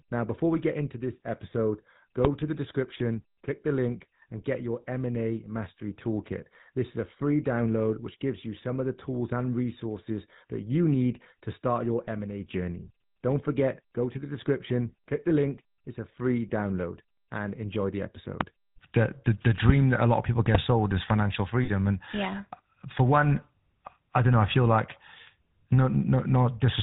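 Throughout, the speech carries the buzzy, gravelly roughness of the GSM full-rate codec, which fits a 13 kbps stream. The codec models the vocal tract and drives it with pulses, and passes nothing above 4 kHz. From 21.64 to 21.69 s, lost GSM frames take out 40 ms of speech. The decoder repeats the last good frame, producing a brief rough, metallic ring.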